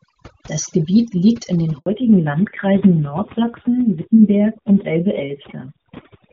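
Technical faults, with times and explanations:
Throughout: overdone noise removal. The noise reduction is set far too aggressively, pulling individual frequency bands down whenever they sit near its noise estimate. Low-level parts of the speech are removed along with the noise, leaving a lowered background that breaks up into twinkling specks.
1.78 to 1.86 s: handover gap. The call is switched between networks, and for about 80 ms no speech frames arrive. The audio decays within a few tens of milliseconds and stays silent until the new link delivers frames, so that stretch of speech is lost.
1.86 s to the end: fallback to narrowband. After the handover the call drops from the AMR-WB (HD Voice) codec at 23.85 kbit/s to AMR-NB at 7.4 kbit/s. Nothing above 4 kHz survives, so the speech turns duller and rougher.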